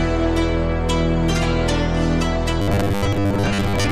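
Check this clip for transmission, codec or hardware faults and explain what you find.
One fault is present. From 2.62 s to the end at 3.91 s there is robotic sound from repeated short buffers: a rigid 100 Hz buzz, likely from about 10 ms of audio replayed while most of the real signal is skipped. Unlike codec warble, its rate stays fixed regardless of the original pitch.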